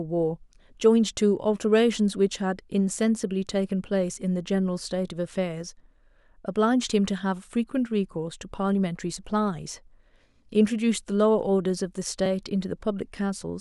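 A block of digital silence at 12.26 s interrupts this speech clip. For about 2.2 ms the signal is replaced by zeros, so the waveform drops abruptly to nothing and then jumps back with no fade in or out. Those two hard edges are discontinuities that spread energy across the spectrum. Because the gap is so short, the missing stretch is not heard as a hole but as a single sharp tick.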